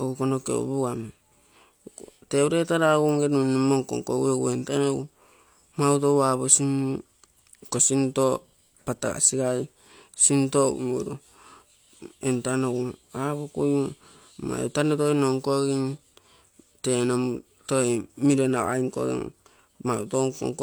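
Nothing stood out on listening to the speech in this recording.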